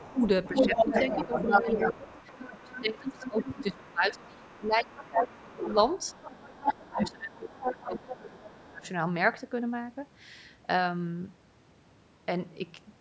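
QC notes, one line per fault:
0.0–3.92 s and 4.27–8.89 s, other side's voice leaking through: a second voice runs under the talker, about as loud as them at first, then roughly 10 dB lower. This is likely residual loudspeaker echo the canceller missed. It adds a voice, whereas suppression takes level away.
0.0–5.77 s and 6.14–8.87 s, speech suppressed in double talk: the talker's own voice dips and breaks up, by about 20 dB and then about 25 dB, over roughly four and then two seconds. This is likely the echo canceller ducking everything during overlap. It removes the talker instead of adding sound.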